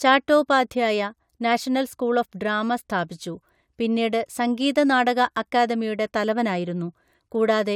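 No technical faults are audible.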